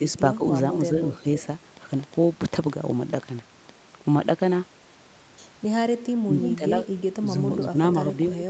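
From 0.9 to 1.26 s, the echo canceller likely could not tell the near talker from loudspeaker echo while both sides spoke, producing speech suppressed in double talk: the speech dips by about 5 dB over roughly a tenth of a second in total. At 1.4 to 1.46 s, an echo leak, likely from a loudspeaker whose canceller let some pickup through, sends back a faint scrap of the speech delayed by 322 ms, about 20 dB below it. From 1.77 to 3.70 s, a train of clicks, likely interference or a faulty connection, lays around 15 similar pops over the sound at an uneven pace of about 7 per second, peaking near the speech level and audible in pauses too. From 6.23 to 7.21 s, double-talk suppression returns more strongly, cutting the speech by up to about 15 dB for roughly 0.3 s. Within it, at 6.41 to 6.57 s, a louder echo leak returns the speech 322 ms late, only about 5 dB down and clearly audible. Brief double-talk dips of about 10 dB follow at 7.71 to 7.76 s and 8.34 to 8.41 s, each a short drop of around 50 to 70 ms.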